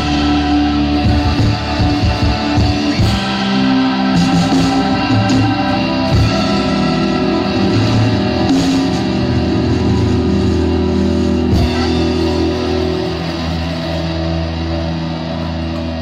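Around 6.30 to 6.51 s there's frames out of order: two roughly 93 ms blocks, each fitting a couple of codec frames, got swapped, so it flutters, no time lost.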